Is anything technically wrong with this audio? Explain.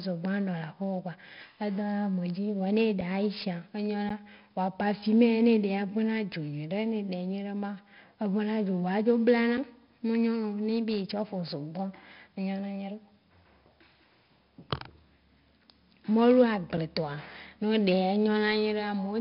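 Yes. Throughout, the speech has been through 4-bit ADPCM compression at around 44 kbps: each sample is coded as a coarse step from a prediction, so level-following quantisation noise rides on every loud syllable as gritty hiss, attacks distort, and nothing remains above 5.3 kHz, dulling the sound.

There are also three blocks of digital silence, at 3.01 s, 4.09 s and 9.57 s. Output buffers were left unfilled and played as zeros, which fits dropped 256- and 512-sample blocks. The sound cuts abruptly to nothing for 5.8 ms, 11.6 ms and 5.8 ms, heard as sharp ticks.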